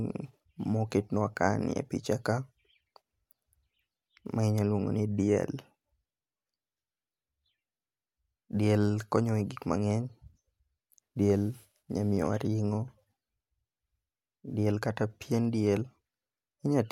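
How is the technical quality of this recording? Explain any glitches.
Two brief clicks interrupt the speech, at 12.17 s and 15.45 s. Each is a single sharp tick with no gap in the sound. The likely cause is dropped samples. A handful of samples went missing, so the waveform jumps abruptly. That step is heard as a click.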